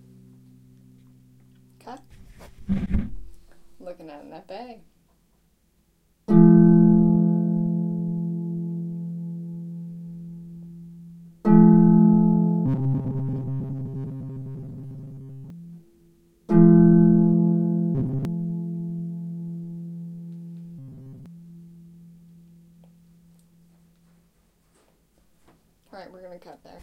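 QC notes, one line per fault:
12.66–15.50 s, 17.95–18.25 s and 20.79–21.26 s: robotic sound from repeated short buffers. The sound turns into a rigid, metallic buzz at 134 Hz that still loosely follows its original shape. The likely cause is a fragment of about 7.5 ms being replayed while fresh audio arrives late, so most of the real material is skipped. On a spectrogram, evenly spaced horizontal harmonics appear at multiples of 134 Hz. On the waveform, short identical cycles repeat back to back.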